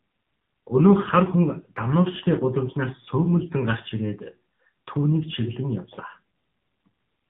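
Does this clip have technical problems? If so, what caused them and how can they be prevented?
Yes. AMR narrowband mobile codec damage runs throughout: the speech is confined to roughly 150 Hz to 3.6 kHz, and a vocal-tract model rebuilding each 20 ms frame from sparse pulses leaves it plainly buzzy and synthetic, which fits a low mode near 7.4 kbps. Prevent it by recording locally or using a wideband codec at a higher bitrate.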